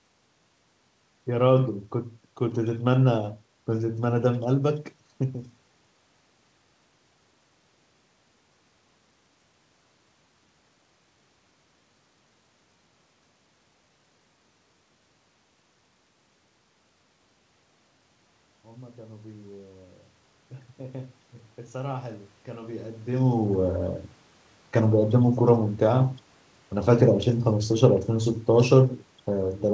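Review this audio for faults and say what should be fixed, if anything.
From 20.77 to 23.82 s the speech and background swell together by about 5 dB: automatic gain rising, as the gain control judged the input too quiet and slowly raised its gain. To prevent it, slow the gain control's response or cap its maximum boost, so brief quiet passages don't trigger a climb.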